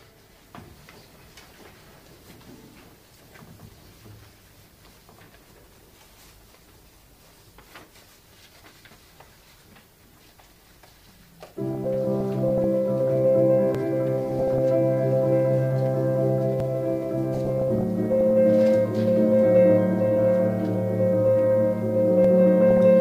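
DAB burbling appears from 11.71 to 12.64 s. Bit errors from poor reception slipped past error correction into the MP2 data. Corrupted samples and scale factors make individual sub-bands blip with noise or jump in level, giving a watery, bubbling texture.

At 13.75 s the sound jumps forward with no gap. This is likely a dropped buffer (overrun): about 10 ms was overwritten before it was read, and the two sides were spliced together.

The burbling returns from 14.30 to 14.59 s. The sound skips again at 16.60 s. More burbling follows from 17.33 to 18.31 s. Another skip comes at 22.25 s, and a final short burst of burbling runs from 22.71 to 22.78 s.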